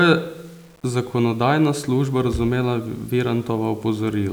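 Speech running the full clip shows low bit depth without dither: a grainy distortion that tracks the signal, gritty on quiet passages, with the softest parts sputtering or dropping out, roughly 35 dB below the level. It fits likely undithered rounding to 8 bits.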